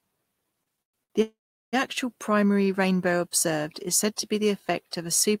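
From 0.63 to 1.12 s, repeated stalls (stutter): four short gaps, the longest 116 ms, are bridged by stretched sound as the jitter buffer repeatedly runs dry. From 1.22 to 1.75 s, a call audio freeze holds for about half a second, trailing into roughly 380 ms of silence, likely from packets held up in transit, before the speech resumes.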